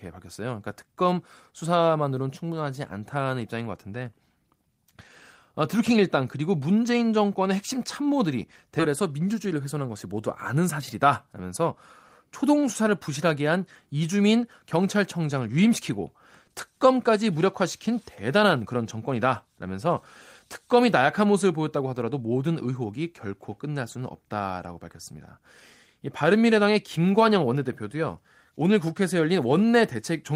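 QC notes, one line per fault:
8.79–8.81 s, skip ahead: playback jumps forward with no gap filled, dropping roughly 0.7 s of speech. Queued audio was discarded, likely when the jitter buffer overflowed, so both sides of the cut are spliced almost directly and the delay shrinks abruptly.
9.45–10.07 s, jitter buffer speed-up: speech runs at 109% speed with pitch unchanged, sounding briefly hurried. The buffer still held excess audio, so the receiver trimmed short pitch-period slices repeatedly, removing about 70 ms to pull latency back toward target.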